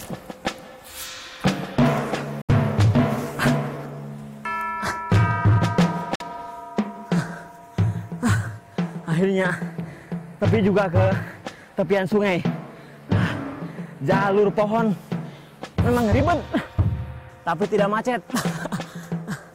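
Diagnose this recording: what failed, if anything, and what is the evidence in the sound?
Silence cuts in at 2.42–2.50 s and 6.15–6.22 s, and the sound resumes further on. Likely a Bluetooth dropout: late playback packets were discarded.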